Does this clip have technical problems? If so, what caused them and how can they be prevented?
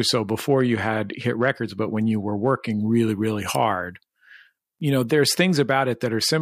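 Yes. From 2.80 to 5.06 s, pre-emphasis was left on: the treble was lifted for recording or transmission and the matching de-emphasis was never applied. The rise, which points to the 50-microsecond FM curve, leaves 10 kHz about 11 dB stronger relative to 1 kHz, so the speech turns thin, bright and hissy on sibilants. To prevent this, pair every pre-emphasis stage with the correct de-emphasis on playback.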